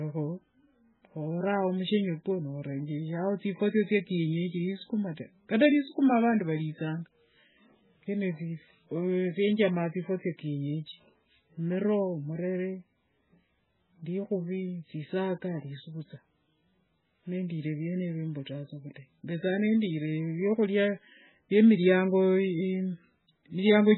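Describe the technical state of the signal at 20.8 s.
At 20.8 s the speech sounds thin, watery and swirly, with nothing above 4 kHz and s sounds reduced to chirpy smears, as it does throughout the clip. This is likely heavy MP3 compression at a very low bitrate, near 9 kbps, which cuts the treble and leaves weak frequency components flickering between frames.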